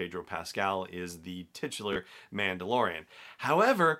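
At 1.93 to 1.96 s the speech has a brief Bluetooth stutter. Late or lost data, likely a couple of packets, made the receiver replay its last buffer. This gives a short buzz, then a jump that skips about 29 ms. The waveform shows identical repeated cycles, and the spectrogram shows the same short slice copied side by side in time.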